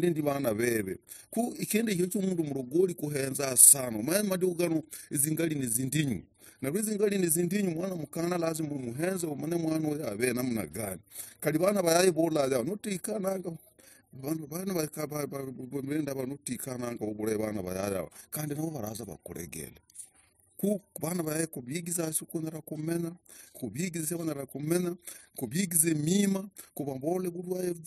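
Overlap-add ripple throughout the speech: windowed frames rejoin without constant-gain overlap, so level pulses about 6 dB roughly thirty times a second, a fast flutter.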